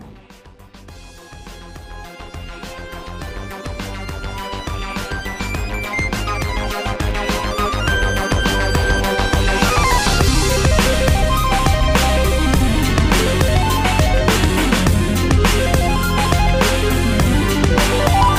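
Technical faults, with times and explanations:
5.11 to 13.10 s, periodic USB or driver dropouts: a short tick recurs every 2.0 s, about five times across this span. At each one, roughly a millisecond of audio is lost and replaced by silence, as though a background task briefly stalls the USB bus or audio driver on a fixed schedule. The sudden gap in the waveform produces a click instead of an audible pause, and the even spacing points to a timed system process, not random interference.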